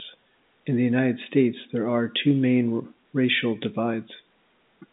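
Nothing goes wrong anywhere in this speech, which simply has the narrow sound of an ordinary G.711 telephone line, with the band running from about 200 Hz up to about 3.7 kHz and nothing above 3.8 kHz, as you'd expect from a 64 kbps A-law call.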